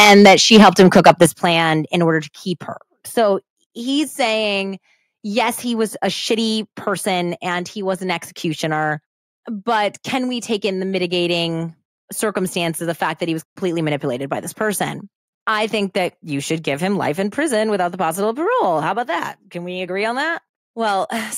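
From 0.0 to 1.45 s, up to "in order to keep", the speech shows microphone overload. Peaks run about 13 dB past full scale, so roughly 7 percent of samples are flattened at the converter's limit, giving the loudest syllables a harsh, crackling edge. The likely cause is input gain set too high.

Inside that stretch and just after it, the microphone volume is stepped down three times. The level drops abruptly by about 3 dB at 0.26 s, about 9 dB at 1.26 s and about 2 dB at 2.28 s, with voice and background falling together. This pattern is likely the call software cutting device gain in response to clipping.

Two blocks of digital silence follow. At 11.86 s, between "take in the mitigating" and "circumstances the fact that", a 24 ms block of silence cuts in with no fade, leaving a short hole. From 13.44 to 13.56 s, between "fact that he was" and "manipulated by this person", a 120 ms block leaves an audible hole, consistent with the output buffer going unfilled in time.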